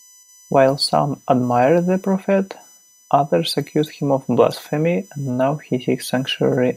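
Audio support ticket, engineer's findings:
USB whine, present throughout the speech. USB bus current drawn in 1 ms frames is leaking into the audio path through shared power or ground. Fixed-pitch whine on a 1 kHz fundamental, strongest at the 6 kHz harmonic, sitting roughly 30 dB below the signal.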